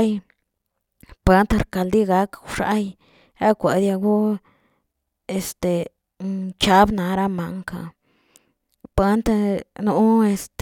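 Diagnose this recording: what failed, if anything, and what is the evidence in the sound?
Nothing stood out on listening to this speech recording that would point to a failure at any stage of the chain.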